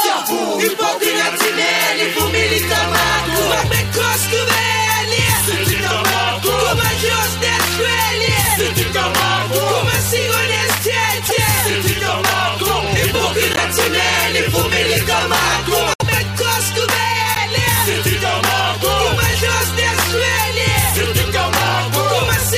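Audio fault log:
11.25–11.32, 13.53–13.61, 15.94–16.02, 17.35–17.38 s: corrupt frame decoded. Damaged compressed frames were played anyway, throwing energy into the wrong frequencies and causing brief chirps, squeaks, blips or bursts of noise, with error peaks of roughly 0 to -5 dBFS. Each event fits two or three bad frames and shows as a short smear of misplaced energy on a spectrogram.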